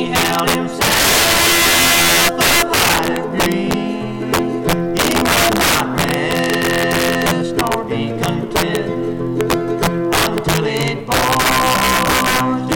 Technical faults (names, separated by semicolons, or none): integer overflow